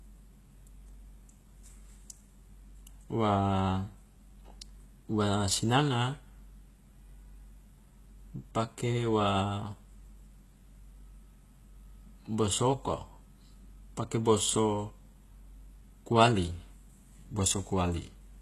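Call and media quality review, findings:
Speech, whole clip: gritty, lispy s sounds, synthetic-sounding treble, nothing above 12.3 kHz. Likely HE-AAC compression, with band replication faking the top end. Fits around 16 kbps.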